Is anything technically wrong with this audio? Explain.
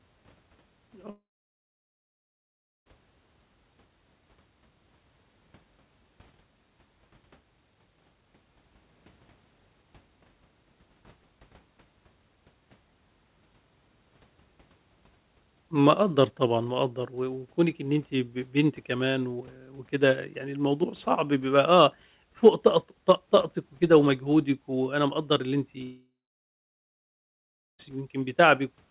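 Yes, there are two long network dropouts in this speech, at 1.1 to 2.88 s and 25.84 to 27.81 s, so roughly 1.8 and 2 seconds gone. The likely cause is packets that never arrived. The receiver carries the last bit of sound forward as a short fading buzz, then it's basically silence for about 1.6 to 1.7 s before the speech picks back up with that chunk missing. All of this comes through a narrowband call path with nothing above 4 kHz, which fits G.711.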